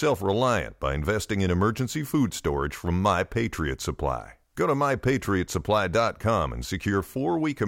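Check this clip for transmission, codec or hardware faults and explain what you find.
No faults detected here.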